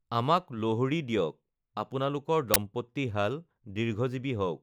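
At 2.54 to 2.56 s, right after "আমাক লোহৰী দিয়ক আপোনালোকৰ", an uninitialised buffer interrupts the speech. A 20 ms block went to the output before any audio was written into it. The player read whatever values were left in that memory and treated them as samples. The result is a short, harsh crack. It is loud against the surrounding speech and ends abruptly when valid audio resumes.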